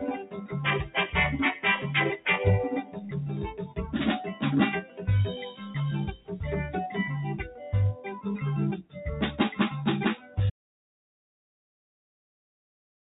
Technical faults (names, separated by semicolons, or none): noise suppressor applied to music or sounds; sound cut by the noise suppressor; audio dropout to silence